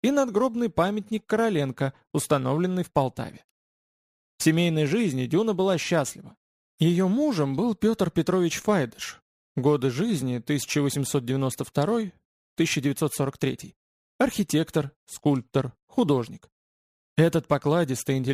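Throughout, crude rate conversion picks the nearest samples without filtering, which points to 48 kHz becoming 44.1 kHz. This leaves a gritty, inharmonic fizz roughly 30 dB below the sound.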